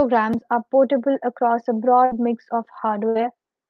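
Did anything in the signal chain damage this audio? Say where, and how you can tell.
Yes, a burst of packet loss on the network path, twice: at 2.05 to 2.13 s, right after "are portable across a" and before "mix of", and at 3.09 to 3.17 s, just after "mix of". Each time a run of packets never arrived, so the receiver stretched the last sound for roughly 55 to 62 ms, letting it fade into a buzz or hiss, and then resumed with about 60 ms of speech gone. The concealed fill separates it from a plain dropout to silence.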